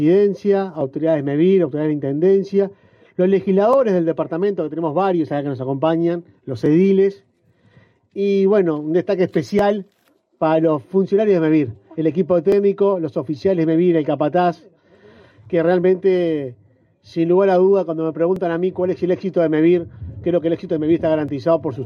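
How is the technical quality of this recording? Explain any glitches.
The recording has one recurring glitch: clock drift buffer slips. A brief click repeats every 2.92 s from 0.81 s to about 21.3 s. The likely cause is two clocks disagreeing by about 500 ppm, so a buffer periodically drops or repeats a block of roughly 70 samples.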